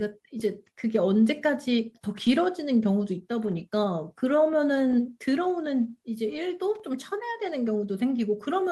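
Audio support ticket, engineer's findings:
Lost packet rebuilt from error correction, four spots: 2.25–2.27 s, 3.43–3.61 s, 4.91–4.93 s, 6.31–6.37 s. No dropout, just brief rough, noisy patches. The 3.43 s one is longest, about 100 ms, which fits several separate 20 ms packets. Opus FEC at work: each lost packet's low-bitrate copy came in the next packet, and the decoder played that instead of a gap.

Loose connector crackle, 6.75–6.80 s. Short irregular scratchy burst. A worn or dirty contact is making and breaking, chopping the signal. Probably a cable or jack. Reseat or swap it and check for movement.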